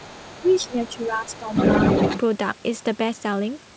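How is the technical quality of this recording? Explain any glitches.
The recording has audible echo and double-talk problems in its first 2.2 seconds, heard through a band limit at 8 kHz that fits a wideband call codec such as G.722.

Other side's voice leaking through, 0.00 to 1.08 s, 1.27 to 1.38 s and 1.54 to 2.20 s: residual echo likely escaped the echo canceller. A second voice sits about 20 dB under the speech at first, then rises to about 5 dB above it.

Speech suppressed in double talk, 0.42 to 1.54 s: with both sides talking, the canceller likely ducked everything. Around 0.7 s in total of the talker dips, by up to roughly 10 dB.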